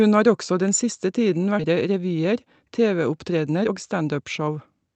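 At 1.59 to 1.61 s, right after "den siste tiden", there is a skip ahead. About a second of audio is missing. It was dropped in transit or discarded when the jitter buffer overflowed while later audio was already queued. Nothing fills the gap, so the material on either side is spliced almost directly, and the speech jumps forward abruptly.

From 1.69 to 2.64 s, jitter buffer speed-up follows. Playback runs at 107% as the buffer sheds roughly 70 ms of excess delay. It does this by cutting out short pieces, one or a few pitch periods long, many times in succession. Pitch stays the same, but the delivery sounds slightly rushed.

A second, stronger speed-up runs from 3.3 s to the end. Here the rate is 112% and roughly 200 ms is trimmed, so the hurried quality is more noticeable. All of this is heard through a call codec path whose band-limited top end fits Opus at about 8 kHz bandwidth.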